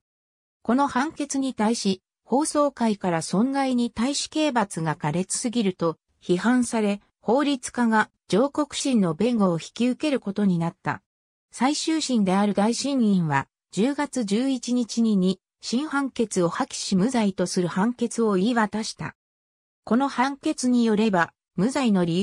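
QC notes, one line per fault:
No faults were heard anywhere in the audio. There is nothing to log for this clip.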